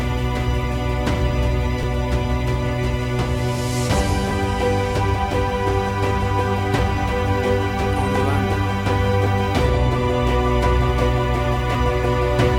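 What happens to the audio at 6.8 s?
At 6.79 s the audio jumps forward by a tiny amount, about 20 ms, with the two sides butted together and no silence between them. This is likely audio missing between chunks, where a slice is lost as one 2.5 s chunk closes and the next opens.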